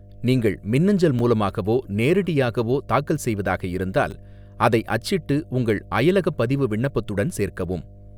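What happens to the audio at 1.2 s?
A brief click or buzz at 1.19 s, between "நீங்கள் மின்னஞ்சல்" and "மூலமாகவோ நேரடியாகவோ தாக்கல்", is a repeated buffer. New audio arrived late, so the device replayed the previous slice once, which fits a 10 ms buffer. The hard joins make the click, and nothing is lost.

A steady low 50 Hz tone also sits under the speech there, roughly 25 dB below it. This is mains hum, likely from a ground loop or nearby transformer leaking power-line current into the signal path.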